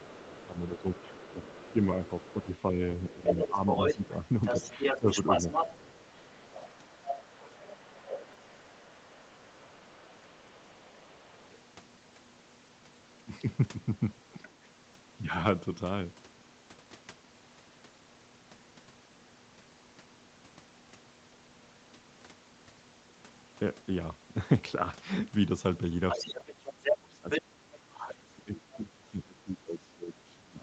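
From the start to about 11.6 s, a second voice runs under the talker at roughly 5 dB below it. This is the other side's voice leaking through. The cause is likely residual echo: the far end played from a loudspeaker, and the canceller left part of it in the microphone signal. Across the same stretch, from 0.05 s to 6.97 s, the talker's voice dips in patches. The dips total about two seconds and reach roughly 10 dB. This is speech suppressed in double talk. The likely cause is the canceller confusing the talker with the echo while both sides spoke. It then turned both down. The voice thins and falls back at those moments.

A shorter dip of about 10 dB comes between 8.02 s and 8.54 s. Inside it, at 8.34 s, a repeated buffer plays. A 5 ms piece sounds two extra times. It is heard as a tiny click or buzz. Audio arrived late, so the device replayed the last block. From 9.59 s to 10.68 s the voice drops again, by as much as 20 dB. 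These dips add up to about 400 ms.

At 14.43 to 14.52 s, a faint scrap of the far side leaks in, roughly 20 dB down. At 14.94 s another 5 ms buffer repeats twice, giving a brief click.

From 26.09 s to 28.1 s, the leaked voice is as loud as the talker. At 26.19 s suppression begins. It lasts to the end, cutting the voice by up to about 25 dB. At 26.41 s a single 5 ms repeat clicks. Throughout, the sound stops at 8 kHz, as expected for the Opus call path.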